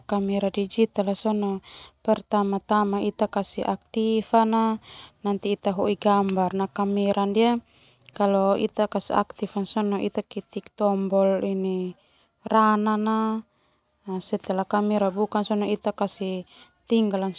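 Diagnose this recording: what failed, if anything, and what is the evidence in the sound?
Nothing failed in this speech recording that can be heard. No stage from capture through to playback leaves audible evidence of a problem.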